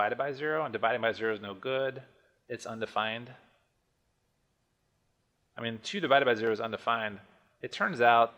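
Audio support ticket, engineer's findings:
Resampler restarted on every block, throughout. Symptom: steady 100 Hz buzz riding on the signal, gone in silences. Mechanism: each 10 ms block converted in isolation, consistent with a 48 kHz to 44.1 kHz path, so every block edge gets a small discontinuity. Spectrogram: faint vertical lines every 10 ms, harmonic comb at 100 Hz spacing. Waveform: tiny steps at each block boundary.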